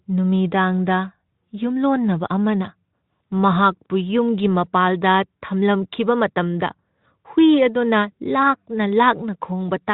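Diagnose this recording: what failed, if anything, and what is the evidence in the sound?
Nothing failed in this recording, and the sound gives no evidence of any fault.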